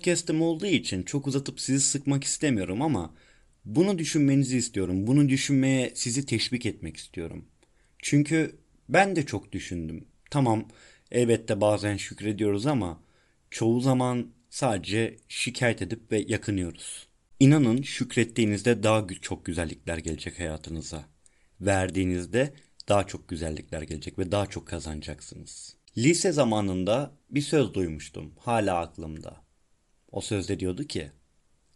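Throughout, the speech likely passed through Bluetooth LC3 compression, consistent with about 48 kbps in 10 ms frames, leaving a plainly audible grainy, breathy edge.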